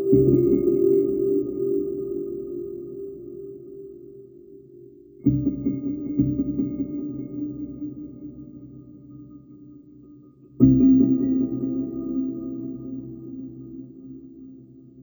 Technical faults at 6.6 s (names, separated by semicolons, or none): stereo read as mono